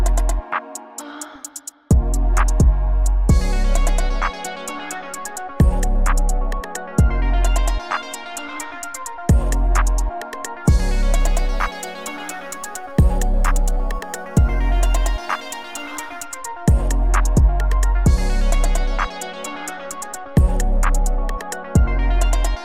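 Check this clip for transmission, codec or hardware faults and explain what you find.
One fault. From 11.19 to 16.22 s, crude rate conversion: samples are repeated rather than filtered, fitting a 44.1 kHz to 48 kHz change. Unrelated tones add gritty fizz, roughly 30 dB down.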